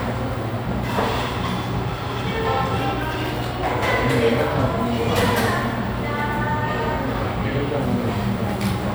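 No technical faults are audible.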